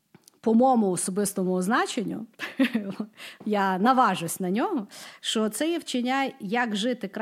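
Nothing technical stands out in this speech recording; there's no fault here to point to.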